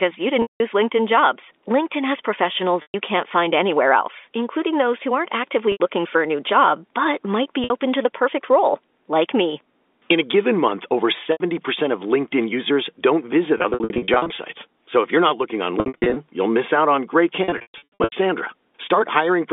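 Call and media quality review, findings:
Packet loss with pitch repetition, eight spots: 0.42 s (180 ms gap), 2.82 s (120 ms), 5.72 s (80 ms), 7.64 s (60 ms), 11.32 s after "a given month over" (80 ms), 13.58–14.38 s after "users don't visit" (scattered, 400 ms total), 15.80–16.16 s between "you're not looking on" and "you'll miss out on", and 17.44–18.12 s (460 ms, worst run 120 ms). Jitter buffer/PLC re-loops the last pitch cycle. Short drops sound held and buzzy, longer ones fade to silence. Losses come in steps that fit 20 ms packets, all on a clean G.711 narrowband line.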